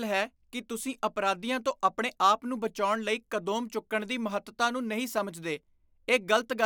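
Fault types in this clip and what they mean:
No technical faults can be heard anywhere in this speech recording. There is nothing to list under any fault type.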